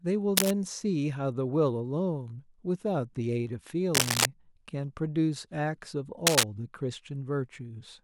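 Speech clip with cable scratch noise at 0.37–0.52 s, 3.94–4.25 s and 6.27–6.44 s: dense, ragged rustling louder than the speech rather than isolated clicks, likely from a worn connector being moved.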